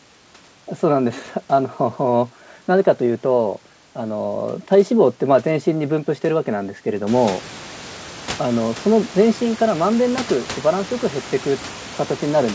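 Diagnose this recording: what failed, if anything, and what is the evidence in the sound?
Nothing failed here: the room's background noise comes up by about 16 dB around the 7 s mark but stays roughly 18 dB under the speech, and the top end stops at 8 kHz, which is just what a G.722 call path at 64 kbps does.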